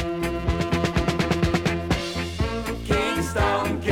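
No technical faults can be heard anywhere in this clip.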